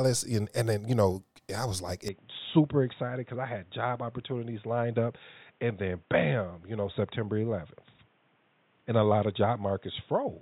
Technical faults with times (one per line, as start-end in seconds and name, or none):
2.08-10.41 input switched to a poorer device